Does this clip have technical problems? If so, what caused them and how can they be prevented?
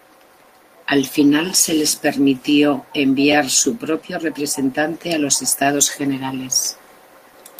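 Yes. The speech has three repeated-buffer stutters, at 3.32 to 3.34 s, at 5.01 s, and at 6.65 to 6.67 s. Each time, fresh audio was late. The player looped the last chunk instead, with a hard join at each repeat. The chunk length fits a 10 ms buffer. It plays twice extra at 3.32 and 6.65 s, once at 5.01 s. So each sounds like a click or brief buzz, and almost nothing is skipped. A larger playback buffer or higher audio thread priority would prevent this.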